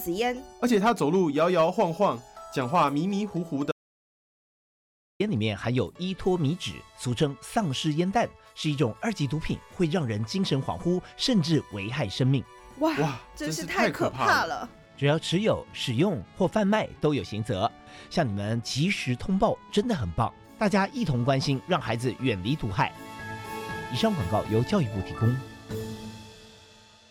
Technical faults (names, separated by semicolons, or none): audio dropout to silence